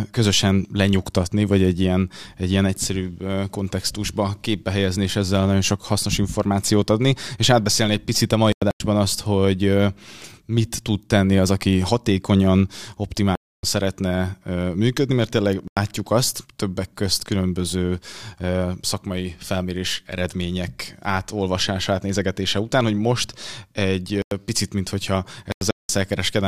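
Speech with five corrupt frame muted dropouts, at 8.52–8.80 s, 13.35–13.63 s (before "szeretne működni mert tényleg"), 15.68–15.77 s (before "azt többek közt különböző"), 24.16–24.32 s and 25.52–25.89 s (after "picit mint hogyha"). Damaged compressed frames were rejected and replaced with silence. Each hole starts abruptly, and timing holds.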